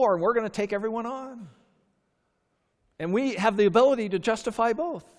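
No technical faults can be heard in this speech recording.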